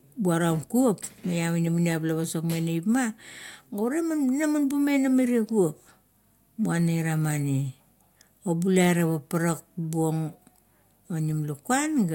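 Nothing technical goes wrong anywhere in this bit of speech, so there's really nothing to flag here.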